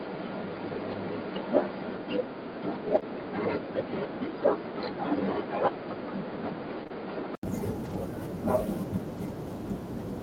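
From the start until 7.43 s the speech sounds dull and boxy, with nothing above 4.9 kHz and a faint new hiss well below the signal. At 7.43 s it brightens again after an 80 ms silence, with almost no change in level. The likely cause is an input switched to a poorer, narrower-band device.

Inside that stretch, 0.91 to 0.93 s and 2.87 to 2.97 s sound briefly rough and grainy. These are lost packets rebuilt from error correction: the decoder played the low-bitrate copies carried in the following packets, so nothing drops out but 20 ms and then 60 ms are coarser.

Right after that, 2.99 to 3.04 s has a short smear where the sound is stretched rather than heard. This is short concealed packet loss: 20 ms never arrived, and the receiver extended the preceding sound over the gap before blending back. Two such fills run back to back from 6.84 to 6.91 s, giving a slightly longer wobble.

After the switch, 7.85 to 7.95 s and 9.17 to 9.19 s turn rough again. 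These are two more stretches of lost packets, three and then one, rebuilt from error correction, covering 60 ms and 20 ms.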